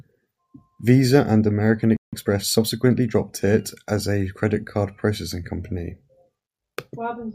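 A playback stall at 1.97 s cuts the speech off mid-flow for about 0.16 s of silence, likely because the player ran short of data or its thread was held up. Time-compressed catch-up follows from 2.13 to 3.21 s: to clear the backlog the player trims and cross-fades small slices, so speech runs about 1.15 times fast at unchanged pitch, settling just before "it as a credit".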